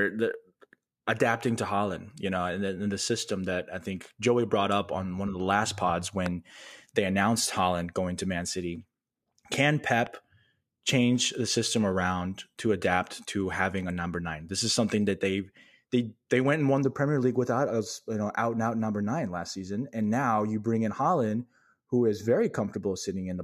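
At 6.26 s, just after "of the last pods", and again at 10.07 s, a loud pop cuts through, most likely a brief voltage pulse from a switch or static. The first is about 15 dB above the speech and the second about 5 dB. Each is a single sharp hit while the speech continues underneath, unlike a dropout, which would leave a gap.

From 16.82 s, after "they went and won", to the end, channel delay (comb filtering) takes over. One channel lags by a fraction of a millisecond, and summing to mono carves fixed notches starting around 3 kHz. The result is a steady hollow, dulled tone rather than a moving phaser sweep.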